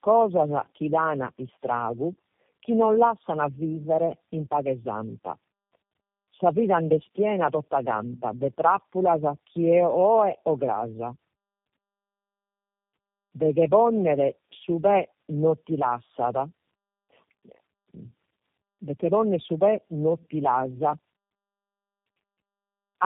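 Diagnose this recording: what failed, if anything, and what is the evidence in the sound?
Tandem speech coding at the codec stage: the speech is rough, muffled and warbly throughout, with nothing above 3.8 kHz, consistent with three low-rate speech coders re-encoding each other's output in series.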